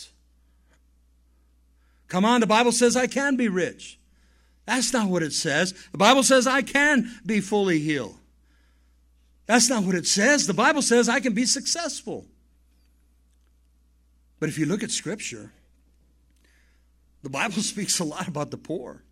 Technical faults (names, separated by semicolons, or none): none